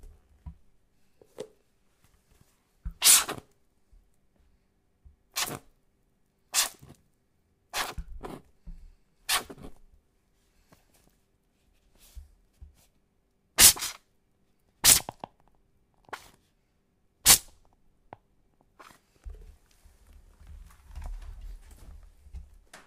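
No technical faults can be heard anywhere in these sounds.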